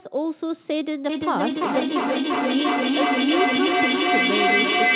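From 1.09 s to the end there is feedback echo between two devices: one device replays the other's microphone, which picks it up again, and neither device's echo canceller removes it. Thin, ringing repeats arrive roughly every 0.3 s and build to about 5 dB above the speech. A spectrogram shows evenly spaced copies stacking up, and the waveform swells instead of decaying.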